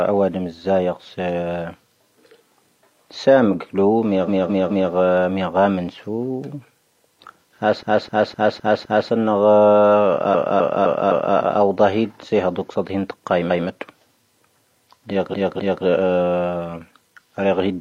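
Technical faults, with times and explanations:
4.25–4.89 s, 7.79–9.07 s, 10.30–11.33 s, 13.46–13.63 s and 15.30–15.81 s: repeated frames. A chunk of the speech loops back and replays like a stutter. The blocks are about 213 ms, 256 ms, 256 ms, 171 ms and 256 ms long, replayed three, five, four, one and two extra times. That's the same run of compressed frames being decoded again, which adds roughly 3.6 s to the clip.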